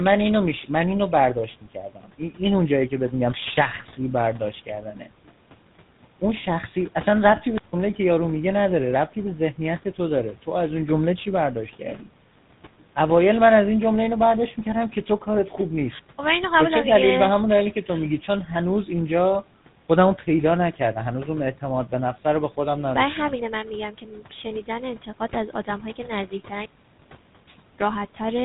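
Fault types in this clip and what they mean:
Tandem speech coding: the speech passes through CVSD, A-law and GSM full rate coders in turn, sounding rough and warbly; the spectrogram shows nothing above 3.8 kHz.
Speech cut by the noise suppressor: parts of the speech are taken for noise and pushed down by about 12 dB, sounding swallowed; the waveform shows brief sunken stretches.
Wireless microphone squelch dropout: the radio link fades until the receiver's squelch mutes the output for about 150 ms at 7.55 s, which shows as a near-flat gap in the waveform.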